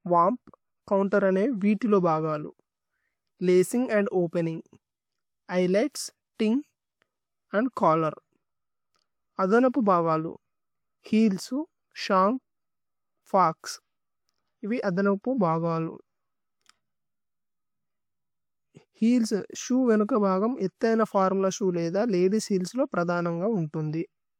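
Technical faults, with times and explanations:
No technical faults detected.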